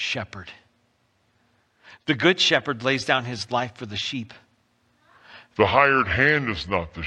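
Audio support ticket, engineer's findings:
Section at the wrong speed, 5.57 s to the end. Speech turns abruptly slow and deep. Playback runs at 0.757x, pitch down about five semitones. Likely cause: an editor or player resampling this segment against the wrong clock rate.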